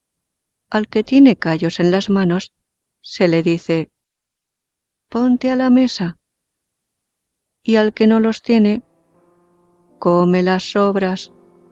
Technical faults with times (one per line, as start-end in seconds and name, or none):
none